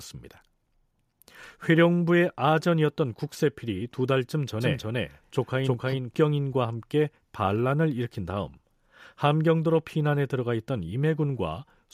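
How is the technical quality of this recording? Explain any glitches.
The recording has one clear glitch. From 4.60 to 6.14 s there is a doubled audio track. A second, equally loud copy of the speech trails by roughly 300 ms. It is likely from a slower capture path or misaligned edit. It sounds like a dry, abrupt echo.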